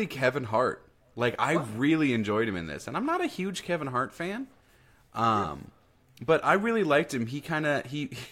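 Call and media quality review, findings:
Audio missing between chunks, 1.35 s, 3.84 s, 6.28 s. Tiny skips about 2.5 s apart, each a very short slice of speech gone with the two sides butted together. Likely the capture or processing stage working in 2.5 s blocks and dropping samples at each block handover. Regular spacing is the telltale.

Compressed frames skipped, 5.43 s. Speech jumps ahead by a couple of frames, about 50 ms of material missing. Probable component: decoder or container, with frames absent or rejected as corrupt.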